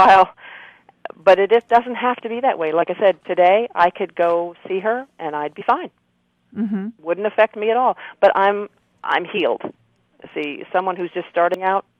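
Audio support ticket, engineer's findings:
Damaged data in compressed stream. Short glitch at 2.81 s, 5.60–5.62 s, 9.36–9.38 s and 11.54 s, each about 20 ms or less. Probable component: decoder input/transport. Corrupt or missing bytes make the decoder misread frames, lose sync and hunt for the next frame header, so a short glitch is heard at each point.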